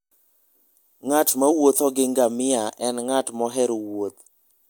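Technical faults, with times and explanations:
Nothing stood out on listening to this speech recording.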